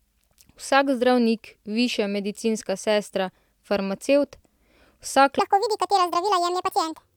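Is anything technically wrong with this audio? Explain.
Yes. From 5.39 s onward, a section plays at the wrong speed, likely from a mismatched clock, at 1.72 times normal: speech rushes and rises about ten semitones.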